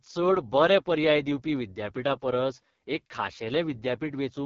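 From start to end, the speech carries heavy AMR wideband (HD Voice) codec damage. Nothing sounds above about 7.2 kHz. The voice model is starved of bits, so speech turns rough and raspy. That fits the codec's lowest rate, near 6.6 kbit/s.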